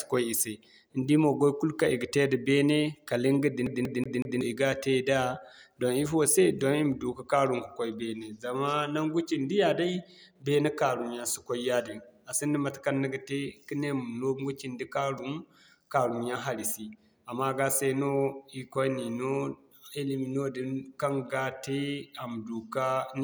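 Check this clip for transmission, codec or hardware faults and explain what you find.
One fault is audible. From 3.66 to 4.41 s, a CD stuck on one turn. A scratch throws the laser back. One 187 ms slice repeats four times, muted at each jump.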